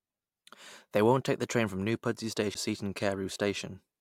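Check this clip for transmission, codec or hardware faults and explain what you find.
One hardware fault is present. CD skip at 2.54 s: the laser jumped tracks, so playback mutes for a tick and resumes from elsewhere in the speech.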